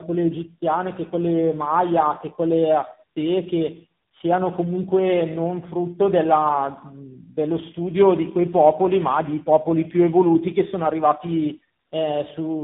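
Tandem speech coding runs throughout the speech: the call was decoded and re-encoded across three successive lossy coders, each compounding the last one's damage. It sounds rough, muffled and warbly, with nothing above 3.8 kHz, which fits a chain ending in AMR-NB at 7.4 kbit/s.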